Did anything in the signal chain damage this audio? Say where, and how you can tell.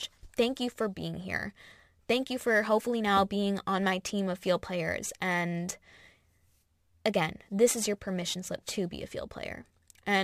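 Yes. The damage comes from crude rate conversion at the sample-rate conversion stage, and it lasts the whole clip. A gritty, inharmonic fizz trails the louder and brighter speech, roughly 25 dB down. Samples were repeated rather than filtered, which fits a 44.1 kHz to 48 kHz change.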